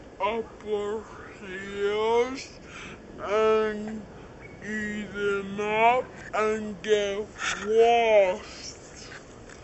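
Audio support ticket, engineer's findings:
Whole clip slow and dropped a full octave: everything at half speed, pitch 12 semitones down, heavy and dragging throughout. Probable component: playback clock or device config. Wrong sample rate, no conversion: fits 44.1 kHz material played back near 22 kHz, halving speed and pitch together.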